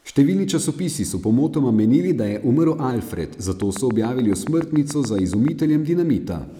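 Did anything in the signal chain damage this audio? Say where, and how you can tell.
Yes, two spots. From 2.07 to 2.91 s, right after "časopisi so pomotoma", the speech runs about 5.8% fast and sits roughly a semitone sharp (98 cents). Speed and pitch moving together like that is a drift correction step, likely from the driver or buffer stage: a clock-matching resampler jumped its rate in one go to rebalance a buffer that had drifted, rather than easing it gradually.

Then from 3.62 to 5.49 s there's a train of clicks, around fifteen of them, near-identical in shape and evenly spaced at about 7 per second, sitting roughly 10 dB above the signal, so you hear them ticking over the speech and gaps alike. That regular, uniform pattern points to the analogue wiring, likely interference coupling in from nearby gear, or possibly a struggling interface injecting pulses.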